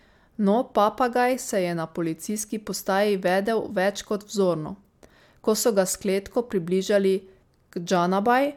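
No technical faults are audible anywhere in the speech.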